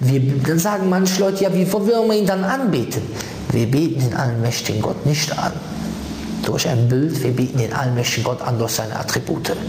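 Throughout the clip the level breathes: it ducks under each loud sound and swells back up in the gaps, a swing of around 20 dB. This gain pumping likely comes from gain set far too high, with a fast limiter or compressor pulling it down.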